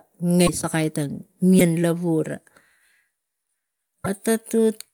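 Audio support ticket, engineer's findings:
Brief garbled disturbances of about 30 ms, with speech jumping ahead: 0.46–0.49 s just before "sakai tang", 1.58–1.61 s just after "sakai tang", 4.04–4.07 s. Likely a broken MP3 bit reservoir: frames of about 26 ms dropped, the next decoding borrowed bytes from the wrong frame.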